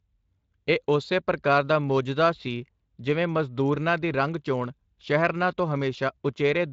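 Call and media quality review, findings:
No faults found in this speech clip. Speex path working: light codec coloration and no content above 7.6 kHz, consistent with a wideband Speex stream at around 24 kbps.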